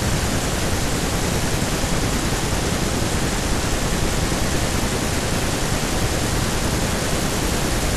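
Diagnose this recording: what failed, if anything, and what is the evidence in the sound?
No system fault detected.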